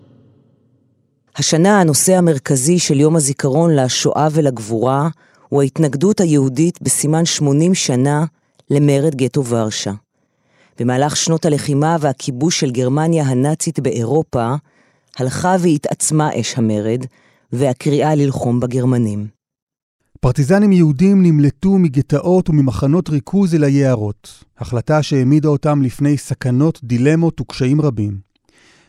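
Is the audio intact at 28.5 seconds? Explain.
Yes, the speech at 28.5 seconds is intact, with no fault audible at that moment.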